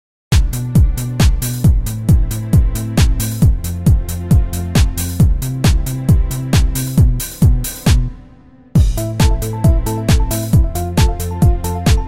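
A cut-off start occupies the opening 0.32 s. The clip holds digital silence until 0.32 s and then drops straight into a sound that was already under way, with no attack and no fade-in. Capture or streaming evidently began late, so the true beginning of that sound was never recorded, and the first audible moment arrives abruptly, as if a switch had been thrown partway through the event.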